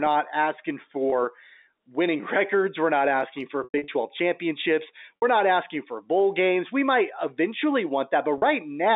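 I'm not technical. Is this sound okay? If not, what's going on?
No. There are three brief glitches from packet loss with pitch repetition, at 3.64 to 3.88 s, 5.17 to 5.22 s and 8.38 to 8.42 s. Pieces of the speech went missing, and the receiver patched each gap by repeating the last bit of speech. In the short gaps that gives a buzzy, held sound instead of an abrupt silent dropout, while the longest gap fades briefly into silence before the speech returns. The first glitch is the longest and choppiest.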